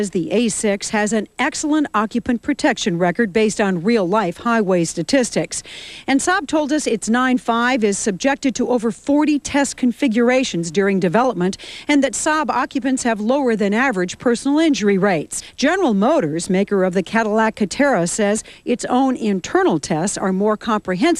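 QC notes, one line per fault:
No faults heard.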